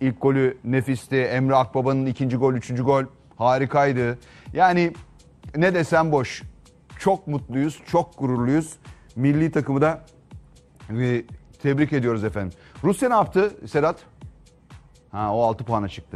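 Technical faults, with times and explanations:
Nothing technical stands out here; the audio runs along without any glitches worth flagging.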